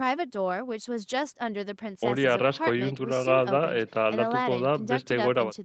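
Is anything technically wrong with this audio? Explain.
No, no technical faults here.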